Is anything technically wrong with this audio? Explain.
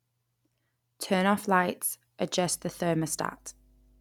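Yes. From 2.45 s, right after "off lights", to the end, faint mains hum appears: power-line pickup adds a steady 50 Hz tone well below the speech, shown as a flat line at 50 Hz on a spectrogram.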